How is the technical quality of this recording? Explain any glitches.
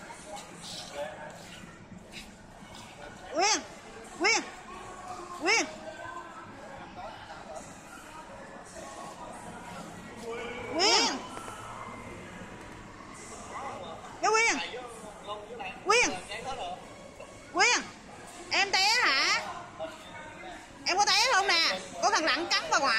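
From 10.38 s to 13.78 s the recording has a doubled audio track: a second, equally loud copy of everything trails the original by roughly a tenth of a second, giving a hard, flam-like stutter on every attack. The echo is full-band and bone-dry, with no decay or room colour, and it switches on and off abruptly. The likely cause is the signal being picked up twice, once through a slower path, and both copies being mixed together.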